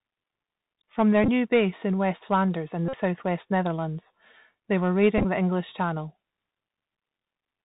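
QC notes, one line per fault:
Throughout: Bluetooth CVSD headset codec. The speech is narrowband with nothing above 4 kHz, s sounds come out scratchy, loud bright passages distort, and a granular hiss sits underneath. The one-bit up/down coding, which fits a 64 kbps link, cannot keep pace with fast high-frequency movement.
1.24 to 1.28 s: Bluetooth headset packet repeated. A short buzzy stutter lands just before "new base in", with about 26 ms of audio replaced across a 45 ms stretch, the longest run around 15 ms. Lost headset packets were filled by decoding the previous packet again, so the repeats every 3.75 ms give a buzz near 267 Hz.
2.88 to 2.95 s: Bluetooth headset packet repeated. This is the longest burst, a steady buzz near 267 Hz lasting about 49 ms before clean audio resumes. It fits roughly 13 consecutive lost packets, each one replaced by a re-decode of the last good packet.
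5.18 to 5.26 s: Bluetooth headset packet repeated. Right after "they were" comes a broken, buzzy patch where about 38 ms of sound is lost across roughly 68 ms, with the longest run around 15 ms. Repeated packets in those gaps produce the same 267 Hz buzz.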